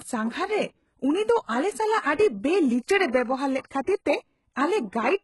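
Throughout the speech, s sounds turn gritty, lispy and metallic, and nothing survives above 11.5 kHz. This is likely HE-AAC compression faking the treble by copying lower bands upward, heavy damage that fits a bitrate near 12 kbps. A spectrogram shows a hard ceiling and blocky, repeated upper-band texture.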